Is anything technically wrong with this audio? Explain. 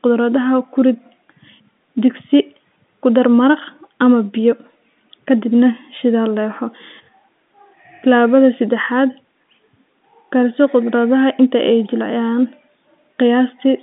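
No, the speech carries the narrow band of G.711 telephone coding, roughly 200 Hz to 3.6 kHz with nothing above about 3.8 kHz, which is expected for a telephone line and not a fault.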